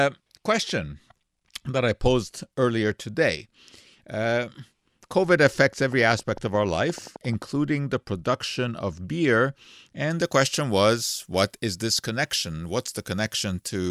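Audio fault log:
5.92 to 7.43 s, train of clicks: a steady ticking runs over the sound just before "the production of beer", about 11.4 clicks a second, evenly spaced, around twenty in all, poking up to about 5 dB above the signal. Regular identical pulses like that are likely interference from nearby gear or a faulty connection or power supply.
10.1 to 13.9 s, pre-emphasis left on: from just after "the production of beer" to the end, the top end jumps up, about 13 dB hotter at 10 kHz than at 1 kHz, matching a 75 µs FM pre-emphasis curve that never got its de-emphasis. That's why it turns thin, bright and hissy on sibilants.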